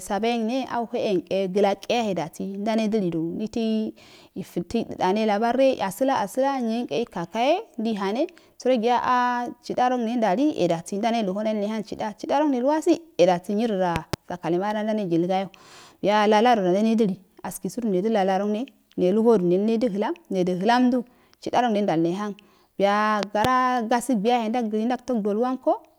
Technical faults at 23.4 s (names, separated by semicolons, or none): loud pop